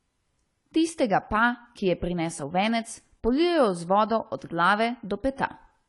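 Throughout the speech, the audio has likely passed through AAC compression at a low bitrate, which fits an AAC-LC encode somewhere around 32 kbps. Starved of bits, the encoder quantises the spectrum coarsely and discards the top end entirely, so nothing survives above 11.3 kHz. The damage is plainly audible: the voice sounds dull and smeared, with a warbling, fizzy texture on sustained sounds and sibilants.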